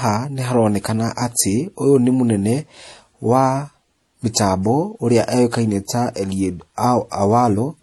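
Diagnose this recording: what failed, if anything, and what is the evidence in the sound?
Codec stage, right through the clip. The speech carries two flavours of compression smear stacked together, with nothing above 12.1 kHz. That's likely transcoding between lossy codecs, fitting an MP3 near 48 kbit/s re-encoded as HE-AAC around 40 kbit/s, each coder stamping its own artefacts.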